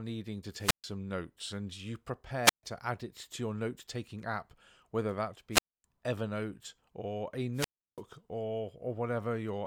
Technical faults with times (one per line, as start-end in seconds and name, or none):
0.57-0.90 wireless microphone squelch dropout
2.43-2.63 wireless microphone squelch dropout
5.51-5.84 wireless microphone squelch dropout
7.54-8.02 wireless microphone squelch dropout